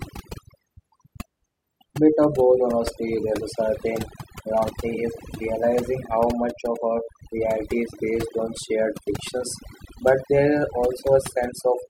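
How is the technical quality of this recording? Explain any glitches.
Technical quality is let down by one fault that runs through the whole clip: overdone noise removal. The gaps fall to near silence with twinkling specks. A noise reduction stage set too hard is switching off individual frequency bands near its noise estimate, taking quiet voice detail with them.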